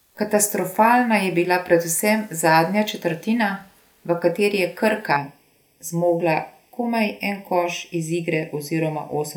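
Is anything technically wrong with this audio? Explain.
Yes. From 5.16 s to the end at 9.36 s the speech turns hollow and phasey. This is channel delay (comb filtering): one channel runs late by well under a millisecond, and when the two are summed to mono, shared content cancels at evenly spaced frequencies, the first notch near 1.5 kHz. Unlike flanging, the notches never sweep, and unlike a simple low-pass dullness, the treble is not just rolled off but notched in a regular series.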